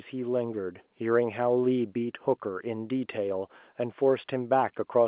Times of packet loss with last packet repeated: none

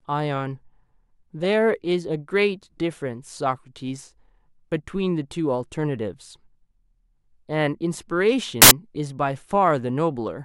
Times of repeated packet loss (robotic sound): none

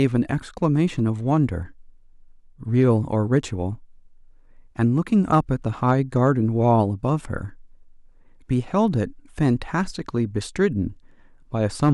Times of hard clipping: 0.01-0.16, 0.64, 2.80-2.89, 3.37, 5.33-5.39, 5.89-6.28, 6.70, 11.83-11.90

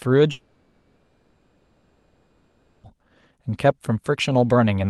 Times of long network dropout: 0.31-2.85

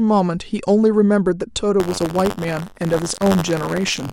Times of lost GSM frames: none

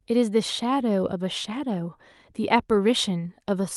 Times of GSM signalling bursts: none

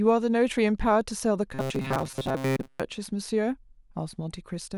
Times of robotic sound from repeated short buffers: 1.54-2.80

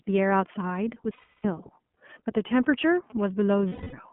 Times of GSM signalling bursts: 2.48-3.21

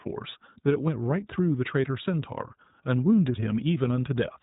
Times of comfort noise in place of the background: none

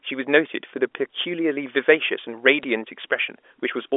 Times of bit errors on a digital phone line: 2.63-2.69

